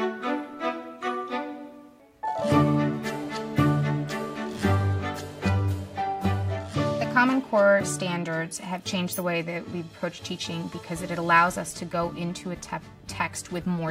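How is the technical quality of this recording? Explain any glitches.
No glitches or technical faults are audible anywhere in the recording; the signal stays continuous and stable throughout.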